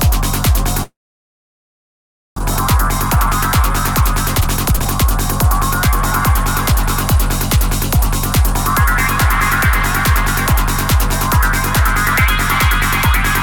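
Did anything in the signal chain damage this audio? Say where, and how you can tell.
Yes. From 0.83 to 2.40 s a long network dropout likely starved the receiver. Its concealment stretches the last sound into a fading buzz, then near-silence. When audio resumes, about a second of material is simply missing, with playback roughly half a second later.

A jitter buffer speed-up follows as the receiver trims that backlog by cutting pitch-period-sized pieces. From 4.00 to 5.13 s the audio runs about 23% fast at unchanged pitch, losing roughly 0.3 s. A gentler 2% speed-up from 5.87 to 8.54 s removes roughly 70 ms more.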